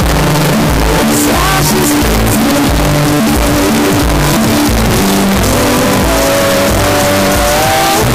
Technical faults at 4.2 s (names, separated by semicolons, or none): signed and unsigned mixed up